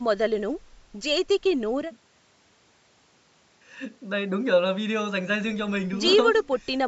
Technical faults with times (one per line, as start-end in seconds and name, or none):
none